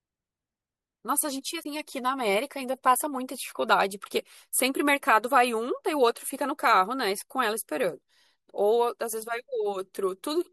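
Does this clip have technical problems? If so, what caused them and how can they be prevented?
Yes: a brief glitch from 1.60 to 1.66 s comes from damaged data in a compressed stream, where corrupted bytes made the decoder misread frames and lose sync. Checksummed, error-protected storage and transmission would prevent it.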